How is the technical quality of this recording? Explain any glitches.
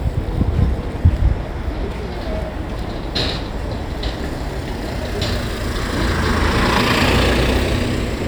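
No glitches or technical faults can be heard anywhere.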